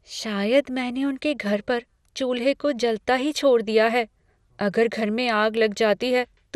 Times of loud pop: none

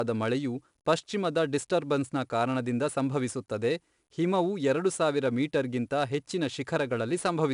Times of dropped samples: none

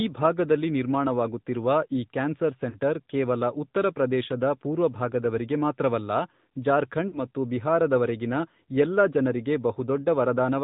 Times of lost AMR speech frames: 2.70-2.77, 7.08-7.19

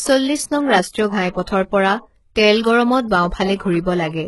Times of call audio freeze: none

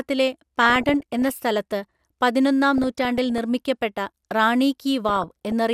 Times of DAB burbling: 0.61-1.42, 2.78-3.38, 5.09-5.52

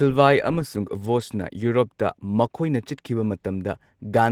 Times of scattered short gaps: none

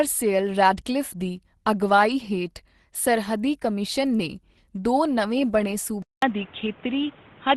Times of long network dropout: none

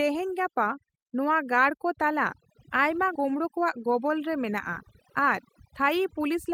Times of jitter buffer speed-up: 3.24-6.49

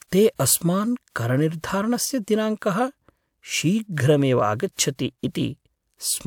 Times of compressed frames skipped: none

